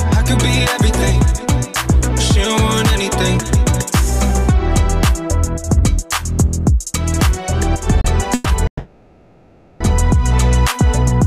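At 8.01 s a sound is held about 30 ms too long, with a faint buzz or dip before the audio carries on unbroken. This short stall from a late packet came from the jitter buffer running dry, so the receiver stretched the last sound until the packet arrived.

Two call audio freezes follow. From 8.34 to 8.47 s the sound turns into a fading buzz or hiss for 110 ms. From 8.67 to 9.82 s it decays into roughly 90 ms of silence before resuming. In both, nothing is lost, and delay builds by 110 ms and then 1130 ms, likely because packets were held up in transit and the buffer ran empty.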